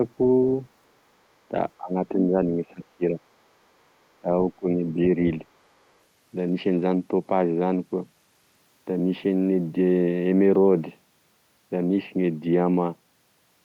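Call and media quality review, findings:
Other side's voice leaking through, 0.22–0.26 s and 4.87–4.93 s. Brief scraps of a second talker, about 20 dB and about 30 dB below the near speech. Likely residual echo: the far end plays on the loudspeaker and the echo canceller leaves part of it in the mic path.

Speech suppressed in double talk, 1.78–1.95 s, 2.12–3.18 s, 4.20–4.29 s, 4.56–4.68 s. Near talker ducks by about 20 dB in the short events. In the longer stretch, the dips total roughly half a second and reach about 15 dB. Likely echo canceller/suppressor misjudging simultaneous talk as echo and attenuating both.

Bluetooth SBC bit pool drop, 5.6–8.6 s. Treble goes dull and gritty quantisation noise rises for about 3 s, then recovers. This fits the phone halving the SBC bit pool on a congested link, from about 28 to 14, near 108 kbps. Upper sub-bands get few or no bits, and the remaining bands are coarsely quantised.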